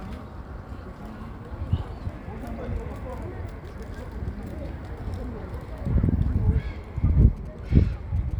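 From 7.22 s to 8.33 s, GSM signalling bursts cut into the everyday sound. A nearby 2G phone is exchanging short control transmissions with its network, not carrying a call. The audio circuit rectifies that radio energy and turns it into sound. The result is a galloping dit-dit-dit of brief buzzes. The buzz repeats at about 217 Hz. It sits roughly 30 dB below the main sound.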